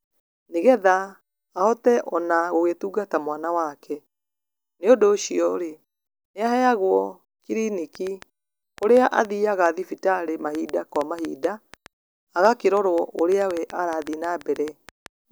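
Something, most likely interference from nearby equipment or a faulty connection or power supply, injects a train of clicks from 7.95 s to 15.07 s, about five per second at an uneven pace, some forty in all, similar in shape and around 10 dB above the speech, popping through pauses too.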